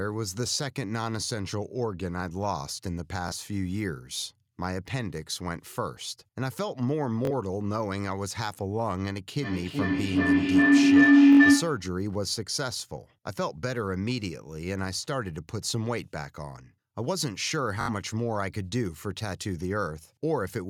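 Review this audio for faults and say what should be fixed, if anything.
Bluetooth stutter at 3.28–3.32 s, 7.25–7.31 s, 11.33–11.40 s and 17.81–17.89 s. Late or lost wireless packets made the receiver replay its last buffer, repeating slices for 21, 43, 64 and 64 ms before the sound jumps ahead. Prevent it by keeping the headset close to its source and clear of wireless interference, or by using a wired connection.

Feedback howl from 9.42 to 11.97 s. Two devices in the room looped microphone to loudspeaker, so the sound built to about 14 dB above the speech. It narrowed to a tone around 300 Hz, pulsing roughly every 0.4 s. Prevent it by muting all but one device in the shared room or having participants wear headphones.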